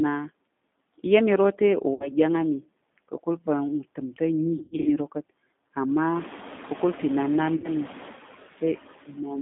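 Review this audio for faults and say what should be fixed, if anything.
Throughout the clip the background pumps: it falls away in the gaps between phrases and swells back underneath the speech, and what remains has a fluttering, warbly texture. These are noise suppressor artifacts. A noise reduction stage is estimating the steady noise and pulling those bands down by about 14 dB, deciding frame by frame. The effect becomes more obvious once the room noise rises by about 17 dB around 6 s, because the suppressor then has much more to remove and its per-frame decisions swing harder. To prevent it, use milder suppression or reduce the noise acoustically at the source.

The whole clip also sounds boxy and slightly synthetic, with a gritty roughness on voiced sounds and nothing audible outside roughly 200 Hz to 3.6 kHz. This is the sound of the G.729 codec, and the damage is plainly audible. 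The narrow band and the buzzy, rebuilt quality fit an 8 kbit/s codec in the G.729A family, which does not store the waveform. It models the vocal tract and pitch and codes a few pulses per frame, which strips away natural detail. To prevent it, negotiate a wideband codec such as Opus or G.722 for the call.

There are three dropouts that smear into a buzzy tone or coloured noise that fades. The first runs 1.94 to 2.12 s, just before "ɗyang á", and covers about 60 ms of missing audio, which fits three 20 ms packets. The second runs 4.58 to 4.88 s, just before "iro ka̱t". Here about 200 ms is lost in pieces scattered over 280 ms, and the longest gap is 100 ms. The third runs 7.56 to 7.70 s, just after "ka̱kul pa̱ inan na", and covers about 80 ms. This is VoIP packet loss concealed by the speech codec. The decoder kept extrapolating from its last pitch and filter with falling gain, and the speech stays weak for a moment after audio returns. 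To prevent it, fix the network path and use a jitter buffer with forward error correction.

From 9.07 to 9.19 s, about 100 ms of speech suddenly goes faint and swallowed, dipping by up to about 13 dB. This is speech cut by the noise suppressor. The suppressor misjudged a quiet stretch of speech as noise and turned it down along with the background. To prevent it, use a gentler suppression setting or a speech-aware suppressor that protects low-level speech.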